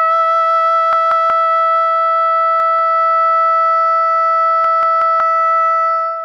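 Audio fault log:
0.93–1.30 s, 2.60–2.79 s, 4.64–5.20 s: repeated buffer, the same 186 ms chunk of music replays two, one, then three extra times with hard joins, fitting an 8192-sample buffer. This is a stutter of identical material rather than the silence of a dropout.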